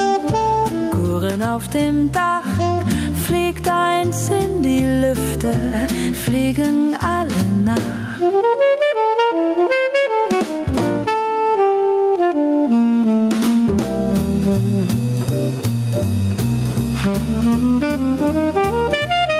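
Gain pumping runs through the whole clip. The level swings by around 10 dB, and loud and soft parts sit squashed close together. The likely cause is gain set far too high, with a fast limiter or compressor clamping down on every peak.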